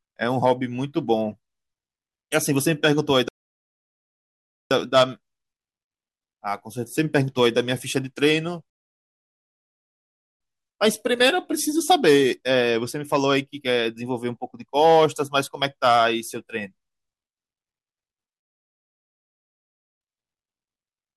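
Three rebuffering stalls interrupt the speech: at 3.28 s for 1.42 s, at 8.70 s for 1.71 s, and at 18.40 s for 1.60 s. Each time the player exhausted its downloaded audio and halted, leaving silence until data arrived; playback then resumes at the exact point it stopped, so nothing is lost but time is added.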